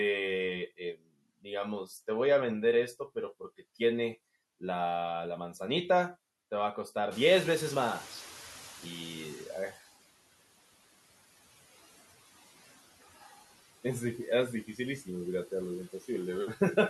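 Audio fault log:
Throughout: noise suppressor artifacts. The suppressor pulls down the frequency bands it judges to be steady noise, frame by frame, cutting the background by about 15 dB. Because the gain in each band is re-decided every frame, the noise floor dips in the gaps and swells back under the speech.
0.67–1.09 s: speech cut by the noise suppressor. Within this stretch the suppressor mistook part of the speech for background and turned it down along with the noise, by as much as about 19 dB at the deepest point. Altogether roughly a fifth of a second of speech is affected, so quieter sounds such as soft consonants or word endings come across as swallowed or faint rather than cleanly present.
7.11–9.79 s: noise suppressor catching up. The room noise steps up by about 20 dB at around 7 s, yet it stays some 18 dB under the speech, so the recording itself is fine. The suppressor's noise estimate lags behind this jump, letting the louder background through with less reduction at first. 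Over about 2.7 s the estimate catches up and the noise settles back down to a cut of about 12 dB, heard as a slow fade of the noise.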